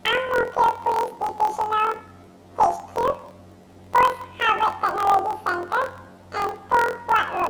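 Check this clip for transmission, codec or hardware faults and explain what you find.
There's one fault, and it runs the whole clip: planar audio read as interleaved. Each roughly 23.22 ms block, which fits a 1024-sample buffer, plays twice at double speed, left then right. The speech comes out an octave high with a 43.1 Hz flutter.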